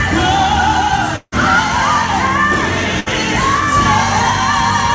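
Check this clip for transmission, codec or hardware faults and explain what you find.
Two transmission faults are audible, both gaps where audio failed to arrive and the receiver covered the hole. The call path fits a G.722 link at 64 kbps, with nothing above 8 kHz.

From 1.16 to 1.34 s there is a long network dropout. The likely cause is a stretch in which no packets reached the receiver. About 160 ms of audio is lost. The receiver extends the last sound as a fading buzz or hiss, then a short patch of near-silence, and the audio resumes further on.

From 3.00 to 3.08 s a burst of packet loss removes about 60 ms. The receiver continues the preceding sound and turns it down across the gap, giving a brief held buzz or fading hiss before the audio jumps ahead past the missing portion.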